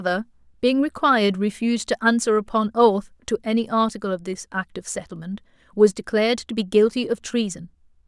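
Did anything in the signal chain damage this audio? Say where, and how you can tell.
No, no damage is audible.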